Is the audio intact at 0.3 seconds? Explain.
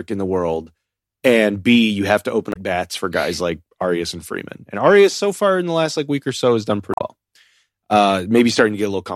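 Yes, at 0.3 seconds the speech plays through with no dropout, click, distortion or other audible fault.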